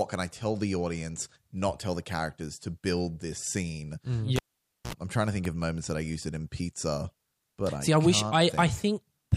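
At 4.36 s a live cable is pulled and plugged in again. As the connector breaks contact, a pop cuts the speech, and the signal drops to near silence for about 0.52 s. When the plug goes back in, only its tip touches at first, picking up a 60 Hz mains buzz for about 55 ms. A second pop follows at 4.93 s as the full connection returns, just before "I'm trying to think".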